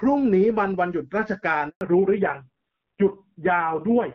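At 1.69 s the speech fades within a few tens of milliseconds into a clean 120 ms silence, a handover gap ending at 1.81 s. Unlike concealed packet loss, nothing fills the hole.

From 1.81 s onward comes a fallback to narrowband: everything above 4 kHz disappears. Compared with the clearer HD Voice before the gap, the speech turns dull and raspy, consistent with a low-rate narrowband codec rather than simple filtering.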